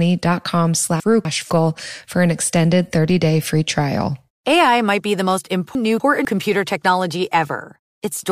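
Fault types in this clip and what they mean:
chunks out of order: twice, a 250 ms chunk arrived one chunk late and played after the one meant to follow it, at 1.0–1.5 s before "for an extended" and 5.75–6.25 s after "might be the most". Each half-second sounds jumbled, with three hard joins.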